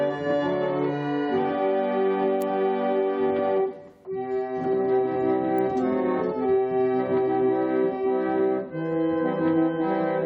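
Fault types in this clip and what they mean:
Electrical switching spike: a nearby switch, motor or static discharge likely arced once, and the audio line picked up that brief burst of interference as an electrical impulse rather than as acoustic sound. In this clip it appears as a single sharp snap at 2.42 s, only a few milliseconds long, peaking at around -20 dBFS. It sits on top of the audio as an abrupt click without disturbing the surrounding sound.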